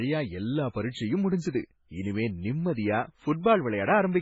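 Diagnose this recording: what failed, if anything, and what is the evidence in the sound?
Codec stage: throughout, the speech stops at 7.6 kHz and swirls wetly, likely heavy MP3 compression starved of bits. The flickering bands rule out a plain low-pass filter.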